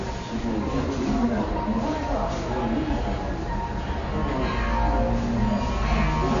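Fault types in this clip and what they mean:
AAC compression, throughout: likely AAC-LC coding at a bitrate near 32 kbps, which cuts everything above 7.1 kHz, leaving the sound dull and audibly degraded.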